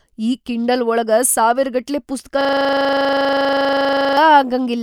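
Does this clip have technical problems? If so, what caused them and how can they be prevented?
Yes. Right after "ಕಿಂಡಲ್ ಒಳಗ ಸಾವಿರಗಟ್ಲೆ ಪುಸ್ತಕಾ", from 2.41 to 4.17 s, you get a system hang loop. The machine or driver froze while the audio hardware kept replaying the same 40 ms slice of its ring buffer, 44 times over. At that 25 Hz loop rate it comes out as a buzzy, rapid stutter rather than a clean tone. To prevent it, fix the driver or CPU stall and have playback mute on buffer underrun instead of recycling stale data.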